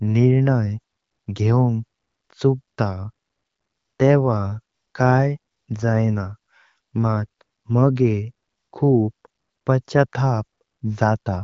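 No technical faults are audible.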